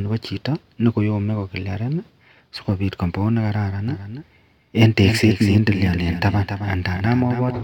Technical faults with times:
3.88-7.63 doubled audio track

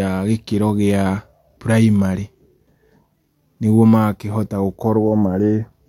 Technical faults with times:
none

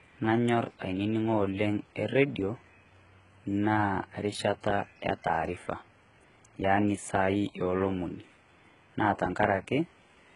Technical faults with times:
0.00-10.35 HE-AAC compression

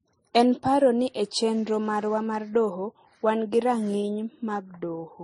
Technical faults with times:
0.00-5.23 transcoding between lossy codecs

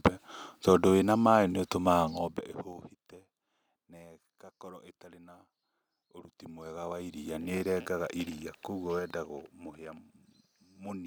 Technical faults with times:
2.05-2.82 zipper noise
6.23-7.68 zipper noise
8.87-9.81 zipper noise

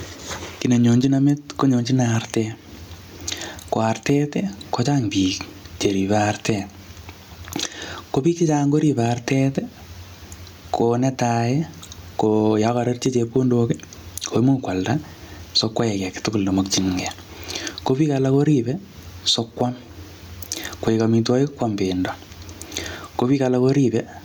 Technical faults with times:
0.00-24.25 gain pumping

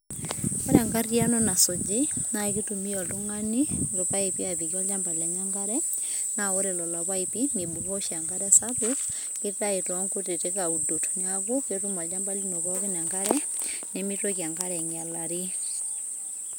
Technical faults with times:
none

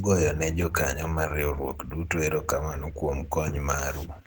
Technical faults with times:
0.00-4.26 Opus compression

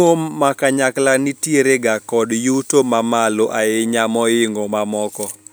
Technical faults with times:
none

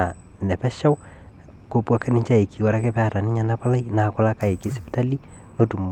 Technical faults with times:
none

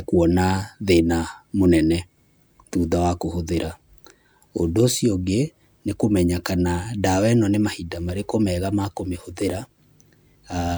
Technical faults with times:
none

